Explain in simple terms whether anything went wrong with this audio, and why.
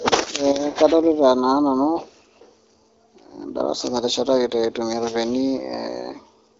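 Nothing went wrong with this audio; the speech comes through the HD Voice phone codec just as it should.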